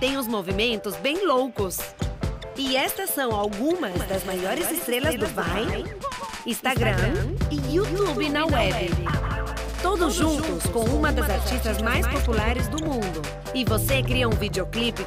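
From 3.92 s to 12.52 s, a second, slightly quieter copy of the sound trails the original by about 150 ms, starting and stopping abruptly with no decay or room colour. This doubled audio track is likely a second capture through a slower path, mixed in roughly 5 dB down.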